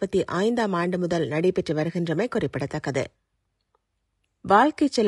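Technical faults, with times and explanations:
Throughout, low-delay AAC compression: the speech has a plainly audible rough, grainy texture, with a hiss-like fill between the pitch harmonics and a top end that sounds thinned and artificial. That's likely the low-delay flavour of AAC used for video calls. With too few bits to code the voice's harmonics cleanly, the gaps between them fill with noise, and the character of the damage fits something around 32 kbps, which isn't enough bits for clean speech.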